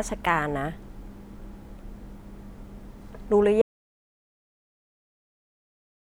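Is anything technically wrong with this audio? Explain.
Yes. From 3.62 s to the end, the speech suffers an audio dropout to silence. The input was likely lost, so only silence was recorded. No room tone remains.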